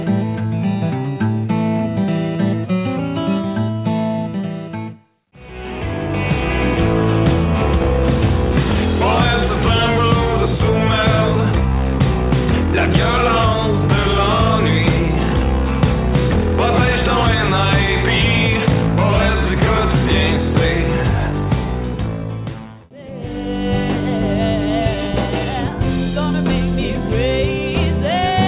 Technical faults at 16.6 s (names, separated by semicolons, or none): none